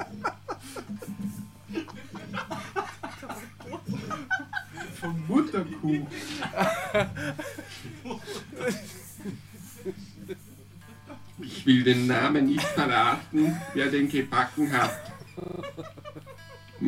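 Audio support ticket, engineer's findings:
System hang loop, 15.4–15.6 s: one 40 ms slice repeats five times at 25 Hz. Host or driver stalled while the hardware replayed its ring buffer; essentially no audio lost.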